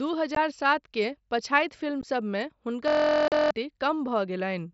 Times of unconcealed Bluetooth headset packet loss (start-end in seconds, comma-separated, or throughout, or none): 0.35, 2.01, 3.28-3.32